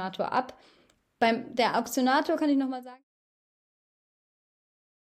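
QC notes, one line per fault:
No faults heard in this speech clip. A smooth fade out begins at around 2 s and is complete by 3.04 s, gliding down with no click or hard edge.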